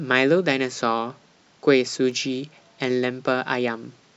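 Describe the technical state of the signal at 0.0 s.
At 0.0 s the speech signal is intact, with no audible technical fault at that moment.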